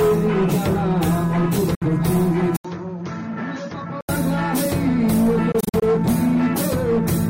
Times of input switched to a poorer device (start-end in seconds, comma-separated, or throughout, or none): 2.56-4.09